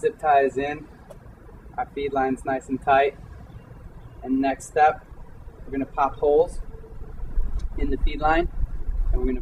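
A resampler restarted on every block runs throughout the audio. The 44.1 kHz to 48 kHz conversion was done on each 20 ms block separately. At every block edge, the converter lacked the real neighbouring samples and filled in silence or the block's opposite end, leaving a small error at each joint. With blocks this short, the errors recur 50 times a second and form a 50 Hz buzz that is present only while sound is playing.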